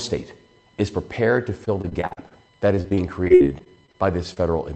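From 1.65 to 2.33 s and again from 2.75 to 3.96 s, repeated packet loss (robotic sound) breaks the audio into a choppy stutter. Gaps up to about 44 ms and then 55 ms were patched by extending the preceding sound, covering roughly a quarter and a fifth of each stretch. On a spectrogram, smeared, frozen-looking harmonic blocks alternate with real audio.

At 4.34 to 4.38 s a short concealed packet loss leaves a brief smear. About 20 ms never arrived and was bridged with 24 ms of continued sound before blending back. The waveform shows a small, unnaturally smooth patch, all within the roughly 8 kHz band of the Opus call path.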